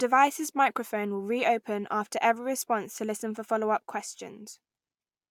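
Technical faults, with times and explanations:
Nothing to flag: no technical faults in the speech recording at any point.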